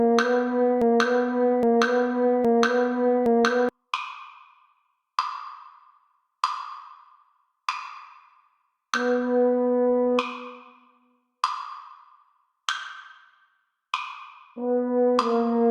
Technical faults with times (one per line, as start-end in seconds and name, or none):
0.82-3.69 broken-record loop